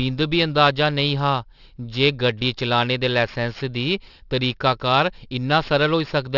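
Speech with aliasing throughout: content above 6 kHz was not filtered before the sample rate was lowered, so it folds back below that edge as unrelated, gritty, metallic components roughly 20 dB under the signal. This fits an unfiltered conversion to a 12 kHz rate.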